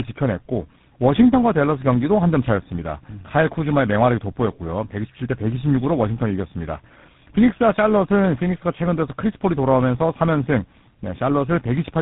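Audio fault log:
Throughout: tandem speech coding, the speech passing through three separate codecs in turn, each recoding the last one's damage, so roughness and warble compound beyond any single codec; nothing above 3.8 kHz.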